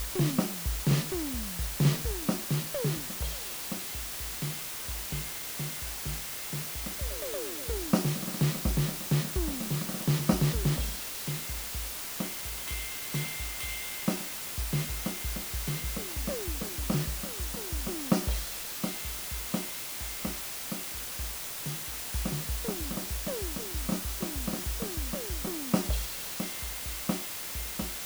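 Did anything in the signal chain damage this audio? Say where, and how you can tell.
Yes. The damage sits at sample-format conversion. Throughout the music, a constant, even hiss sits only a few decibels below the signal, with no distortion. That points to low bit depth with dither: the audio was reduced to 5 bits, and the dither turned rounding error into steady white noise.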